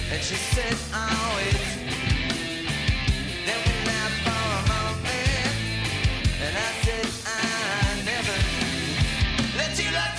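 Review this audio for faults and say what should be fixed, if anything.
Nothing here needs fixing, so you can leave this one as it is.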